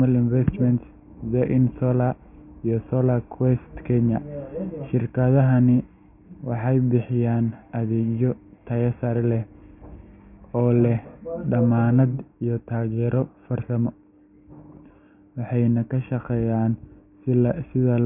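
No audible faults anywhere in the speech; nothing to flag.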